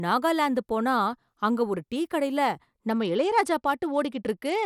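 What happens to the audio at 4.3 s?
At 4.3 s the speech is inside a Bluetooth SBC bit pool drop. It starts at 2.89 s, just after "அங்க ஒரு டீ கடையில", and lasts to the end of the clip at 4.65 s. The link seems to have been congested, so the sender cut the bits per frame sharply. The sound points to a fall to about 88 kbps. The highest sub-bands get little or nothing, so the treble goes dull. The remaining bands are coarsely quantised, which adds a gritty noise.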